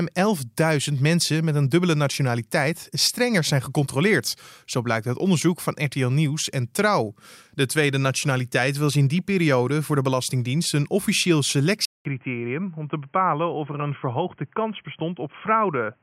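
Input switched to a poorer device at 11.85 s, just after "een officieel": a 200 ms gap, then the speech turns boxy with nothing above 3.2 kHz, drops about 5 dB in level and gains a faint new noise floor, most likely from recording moving to a narrower-band microphone or headset profile.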